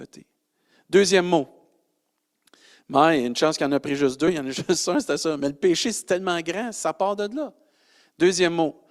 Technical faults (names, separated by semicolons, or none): compressed frames skipped